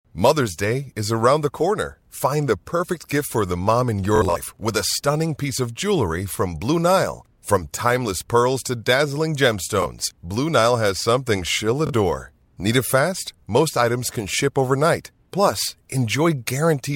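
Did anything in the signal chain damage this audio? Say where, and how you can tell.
Yes. Short buzzy stutters break the speech at 4.16 to 4.36 s after "the mom in your", 9.82 to 9.86 s after "timeless pearls to dazzling" and 11.87 to 11.93 s after "has something she'll". This is Bluetooth stutter on the wireless link: lost packets made the receiver repeat its last slice.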